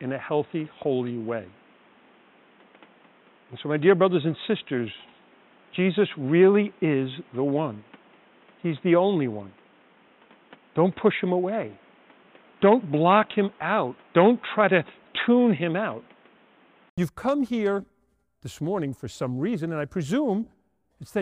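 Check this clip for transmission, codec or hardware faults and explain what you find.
One fault is audible. Until 16.98 s the speech sounds dull and boxy, with nothing above 3.8 kHz and a faint noise floor. An 80 ms gap then gives way to fuller sound, likely an input switched to a poorer device and then back.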